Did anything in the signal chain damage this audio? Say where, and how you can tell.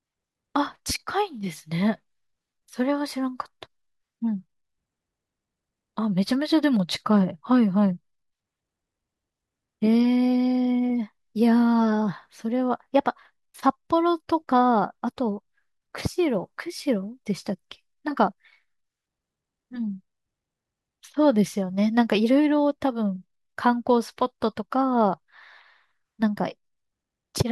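No, nothing along the signal chain seems to have damaged this speech recording, and I can't hear anything that points to trouble at any stage.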